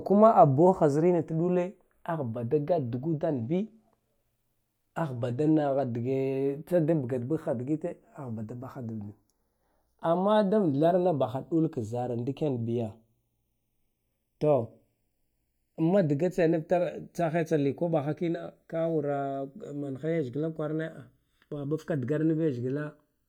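Throughout the speech, the channels drift apart. Each side was captured on its own clock, and the two run at slightly different rates, tens of parts per million. The offset creeps to under a millisecond. Summed to mono, comb notches sweep slowly, giving a slow flanging.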